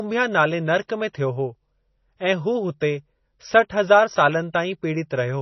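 Speech with heavy MP3 compression throughout, likely from a low bitrate around 24 kbps: nothing above 5.9 kHz, giving a dull, watery, swirling sound.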